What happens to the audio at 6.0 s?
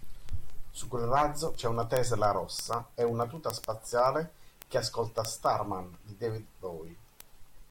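Word clock ticks are running at 6.0 s, part of a steady series from 0.15 s to 7.69 s. The speech reaches a device whose own clock isn't locked to the sender's, and the two drift apart by a few hundred parts per million. Each time they slip past each other, a single sample is dropped or doubled. That comes out as sharp ticks of uneven strength, roughly every 70 ms.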